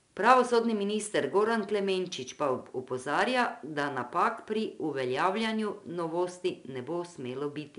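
Throughout the speech, 4-bit ADPCM compression leaves a gritty hiss riding on every loud syllable, fading as the level drops, with roughness on sharp onsets where the step size lags. Unlike perceptual-codec swirl, it's plain broadband grit; nothing sounds above 10.6 kHz, fitting roughly 88 kbps.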